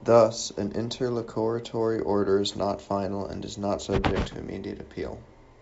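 No technical faults can be heard in the speech. It comes through G.722 wideband telephone coding at 64 kbit/s, with nothing above about 7.7 kHz and at most a faint trace of the coding.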